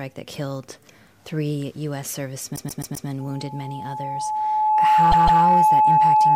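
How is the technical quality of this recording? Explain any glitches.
The recording has two kinds of serious glitch. From 2.55 to 3.07 s, repeated frames occur: a run of compressed frames was sent again, so a 130.6 ms stretch plays four extra times, stuttering and adding 0.52 s. At 5.11 to 5.42 s a 156.7 ms stretch repeats twice more. From 3.20 s to the end, a loudspeaker feedback squeal appears: the microphone picks up its own speaker, so an 859 Hz tone swells over a second or two into a howl roughly 15 dB above the sound.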